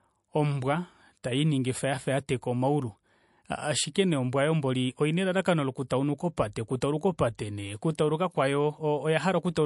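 From start to finish the speech sounds watery and swirly, with nothing above 11.3 kHz: likely MP3 compression starved of bits, fitting roughly 48 kbps.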